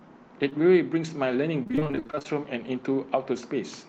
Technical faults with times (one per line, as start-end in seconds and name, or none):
0.49-0.53 short concealed packet loss
1.63-2.35 repeated packet loss (robotic sound)